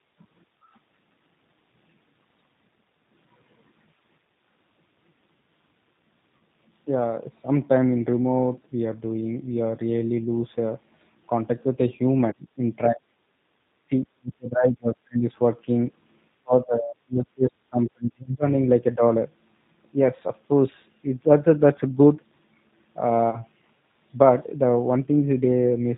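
It's a speech clip carried over the G.729 codec at 8 kbit/s, so everything above 4 kHz is gone and the voice has that slightly rough, synthetic edge throughout. There's VoIP packet loss concealed by the speech codec at 6.37–6.40 s and again at 23.30–23.41 s. Each time about 30 ms of audio went missing, and the decoder papered over it with a brief stretched, fading smear that takes a moment to recover. Between 13.89 and 15.24 s, and again from 16.42 to 18.44 s, the speech sinks or drops out in pieces, by up to about 40 dB and about 35 dB, for around a second and around two seconds in total. That's likely speech suppressed in double talk, where the echo canceller ducked this talker while the far end was speaking.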